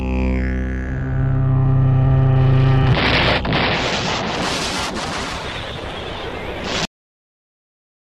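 At 6.85 s the audio has a cut-off end. The sound stops mid-event, with no natural decay or fade, and the remaining time to the end is digital silence. The last stretch of audio was never written to the file or never played out, so the signal simply ends where the capture stopped. On a waveform the trace drops straight from active signal to a flat line; a spectrogram shows energy ending in a hard vertical edge, followed by empty black.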